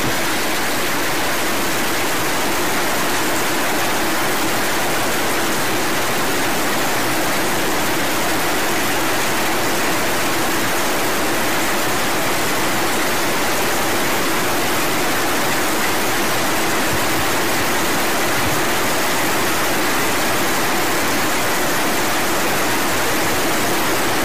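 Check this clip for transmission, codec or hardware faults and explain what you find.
There's one fault, and it runs the whole length of the clip: a harsh, buzzy distortion riding on everything, with the gaps between sounds filled by a gritty noise floor instead of silence. That points most likely to a stuck bit, one line of the sample word jammed at 0 or 1. Roughly half the samples get knocked off by that bit's weight, a step somewhere around -15 dBFS, so it's a fairly high-order bit. Small values near zero flip with sign, which is why the quiet parts hiss so loudly.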